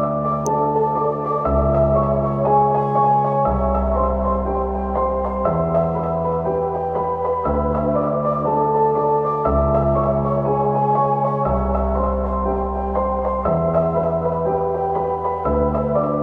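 A recording of sounds, marked near the start by a single sharp snap at 0.47 s that sits on top of the audio rather than belonging to it, peaking at roughly -15 dBFS. It is a short, hard-edged transient with no decay or room character of its own. This is an electrical switching spike, most likely a nearby switch, motor or static discharge arcing briefly and being picked up by the audio line as a burst of interference.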